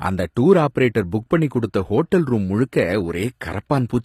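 A speech clip carrying plainly audible HE-AAC compression damage from start to finish, which points to a low bitrate around 24 kbps. The lower band sounds coded directly, but the treble is likely rebuilt by spectral band replication, so sibilants come out gritty and metallic rather than simply dulled, and everything stops at 15.4 kHz. A plain low-bitrate codec would instead lose the top end and sound muffled. Here the highs stay bright but don't match the harmonics below.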